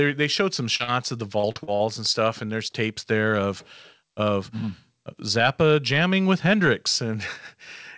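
Speech carried over a call path, with nothing above 8 kHz, which points to a wideband codec such as G.722 at 64 kbps. Two short concealed packet losses fall at 0.76–0.83 s and 0.84–0.90 s, just after "showed some" and before "of the". Each is a roughly 40 ms hole bridged by extending the preceding sound, heard as a brief smear or wobble before the real audio resumes. Isolated single gaps like these separate it from the second fault. From 1.39 to 1.82 s, between "of the" and "and stuff and there's", repeated packet loss gives a choppy, robotic sound. Four gaps of up to 41 ms each are patched in quick succession, concealing about 37% of that stretch, so the patches run together into a choppy texture rather than one momentary blip.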